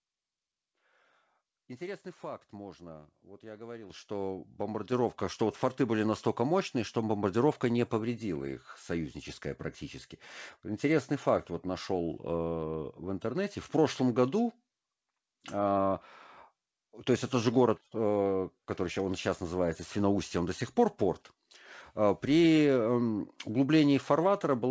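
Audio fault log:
3.9 s and 4.92 s: microphone volume stepped up. The input level jumps twice in quick succession, first by about 9 dB and then by about 5 dB. Each time the capture gain is raised in a single step rather than ramped, so speech and room background get louder together at once. On the waveform the envelope widens abruptly at each point. On the spectrogram the whole band, which stops at 8 kHz, brightens uniformly at once.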